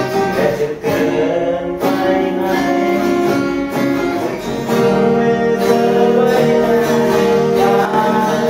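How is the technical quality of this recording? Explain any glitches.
There is one glitch, near the end. One channel drops out from 7.85 to 7.94 s. For about 80 ms the level falls abruptly by about 6 dB and then returns. The likely cause is one stereo channel going silent briefly, so after mono summing only half the shared signal remains, and anything present only in that channel disappears.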